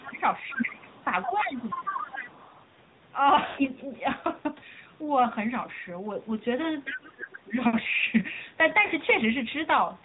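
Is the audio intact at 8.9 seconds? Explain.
No. From 8.86 to 8.92 s there are lost AMR speech frames: about 40 ms of missing data, which fits two 20 ms frames. The decoder fills the gap by repeating the last good pitch and vocal tract settings at falling gain, so the sound briefly smears and dips, then returns weak or rough for a moment.

The AMR narrowband mobile codec also shapes this moment, as it does the whole clip. Nothing above 4 kHz survives, and the sparse pulse excitation gives the speech a plainly audible buzzy, synthetic edge, consistent with a high-rate mode around 10.2 kbps.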